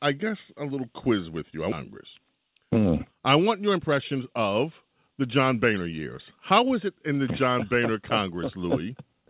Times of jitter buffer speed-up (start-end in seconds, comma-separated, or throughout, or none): 3.42-5.99